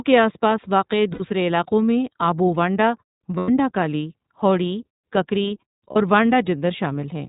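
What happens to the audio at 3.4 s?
Lost iLBC frames hit the speech from 3.38 to 3.50 s. About 100 ms is missing, which fits five dropped 20 ms frames. The decoder fills the gap by repeating the last pitch cycle mixed with noise. It sounds like a brief held, buzzy vowel. The voice recovers almost immediately after.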